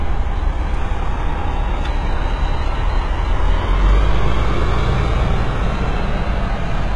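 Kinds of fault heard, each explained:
HE-AAC compression: The treble sounds rebuilt rather than captured, gritty and metallic, and the damage is heavy throughout. Nothing reaches above about 11.3 kHz. This is likely HE-AAC at a very low bitrate, around 12 kbps, copying lower bands upward to fake the top.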